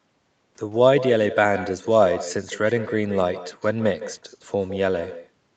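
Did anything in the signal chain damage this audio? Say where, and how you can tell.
Yes. There's echo with no canceller on the far end of the call. The whole clip is shadowed by a thinner copy about 13 dB down, trailing by something like 150 ms. Their loudspeaker fed back into their mic, and nothing cancelled it before it returned.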